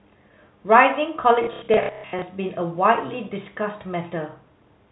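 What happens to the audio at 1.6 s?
At 1.6 s the audio is inside a stretch of packet loss with last packet repeated, running from 1.44 to 2.22 s. About 450 ms of audio is missing, scattered over those 780 ms, with the longest gap around 120 ms. Each time data goes missing, the receiver replays the last packet it received until fresh audio arrives. Because the same packet repeats at the packet rate, the longer runs turn into a buzzy, robotic stutter.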